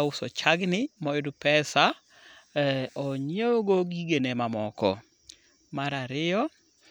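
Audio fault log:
No faults detected in the speech on this pass; nothing to log.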